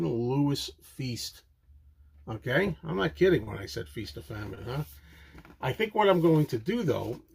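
At about 3.43 to 3.50 s, and again at 4.55 to 4.60 s, the sound briefly hangs, with one moment held too long and carrying a faint buzz or dip before it moves on. These are short stalls from a late packet. Each packet arrived behind schedule, the jitter buffer ran dry, and the receiver stretched the last sound, by 36 ms and then 17 ms, until the packet arrived. Playback resumed exactly where it left off, so nothing is lost, but the delay grows by those amounts.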